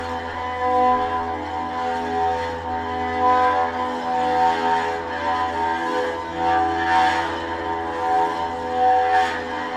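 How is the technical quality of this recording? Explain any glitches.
One glitch stands out. From 0.89 to 3.12 s, crude rate conversion adds a faint, inharmonic fizz tracking loud and high content, consistent with unfiltered linear interpolation, fitting 32 kHz to 48 kHz.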